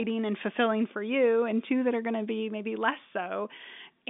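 Nothing stood out on listening to this speech, which comes through the ordinary narrow band of telephone coding.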